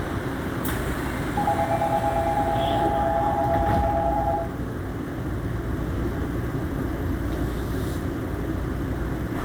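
At about 3.75 s there's a single sharp click, and it looks like dropped samples. A tiny stretch of the stream, a fraction of a millisecond's worth, likely went missing, so the waveform jumps straight from one value to a later one instead of moving smoothly between them. Nothing audible is actually lost; you just get that one quick tick, and on a spectrogram it shows as a thin vertical line running up through the frequencies.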